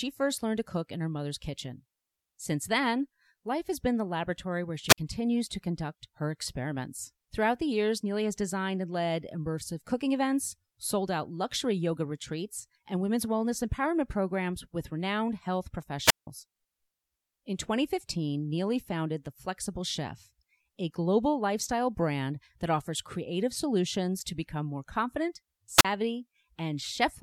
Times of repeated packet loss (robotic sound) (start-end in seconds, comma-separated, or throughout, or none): none